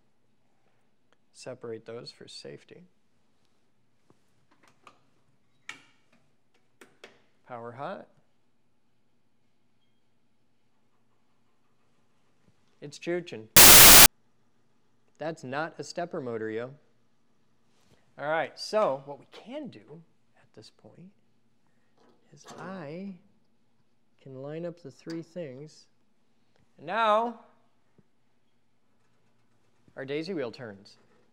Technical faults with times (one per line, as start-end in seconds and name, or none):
13.56-14.06 samples built from the wrong bytes